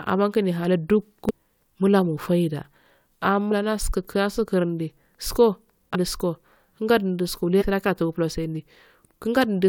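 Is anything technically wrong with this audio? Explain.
Yes. Damaged data in a compressed stream breaks the speech four times: 1.29–1.31 s, 3.51 s, 5.94 s and 7.60–7.63 s. Corrupt bytes make the decoder misread frames and hunt for the next header, producing short chirps, squawks, clicks or holes. On a spectrogram they appear as thin broadband vertical streaks, and in the waveform as jagged glitches.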